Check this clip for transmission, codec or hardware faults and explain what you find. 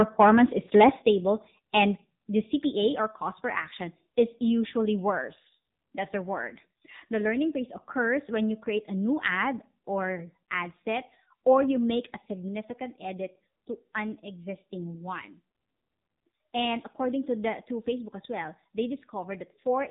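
One codec fault runs through the whole clip. AMR narrowband mobile codec damage: a low-rate vocal-tract model, heavy enough to fit roughly 6.7 kbps, cuts everything above 3.8 kHz, leaving speech muffled, buzzy and synthetic.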